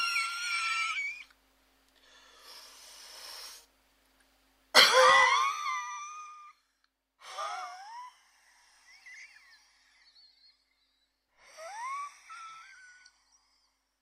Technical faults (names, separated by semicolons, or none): zipper noise